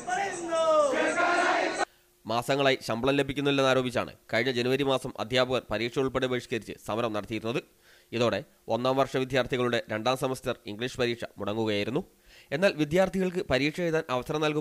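Listening through, nothing stood out as a technical fault at any point.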